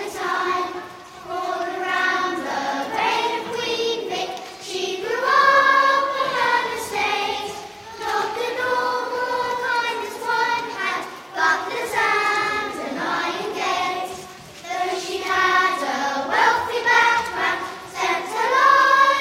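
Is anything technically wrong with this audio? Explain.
Yes. There is an overlap between stream segments, heard at 11.02 s and again at 17.03 s, six seconds apart. The time stamps of neighbouring segments claim the same stretch of audio, and the player trims the overlap even though that material was never actually duplicated. About 17 ms of real sound vanish at the first event and about 6 ms at the second, and the waveform jumps across the gap. Each event is heard as a brief click or tiny skip.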